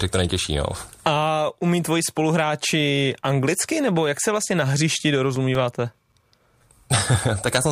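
At 4.98 s, just after "jak se vlastně na", CD scratch ticks begin. They run until 6.70 s. A scratch or blemish on the disc wipes out more data than error correction can repair. This happens once per revolution. The player patches each gap by interpolating or muting a few milliseconds of samples. Ten ticks fall across this stretch, about six per second. They sound like regular clicks or tiny dropouts in the speech, of uneven strength.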